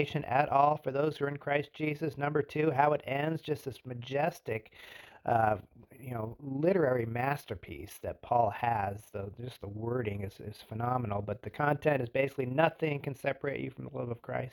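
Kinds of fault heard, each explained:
Overlap-add ripple: rejoined windowed frames don't sum to constant gain, so the level pulses by about 6 dB around 30 times a second, a rough flutter.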